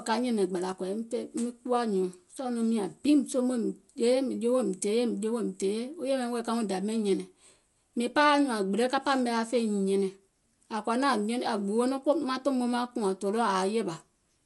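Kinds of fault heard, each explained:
Dolby Digital compression: the speech sounds dull and rough throughout, with fluttering noise around voiced tones, fitting a bitrate near 64 kbps, likely from an AC-3 style coder filling bit-starved lines with noise. A spectrogram shows nothing above 11.4 kHz and speckled energy between harmonics.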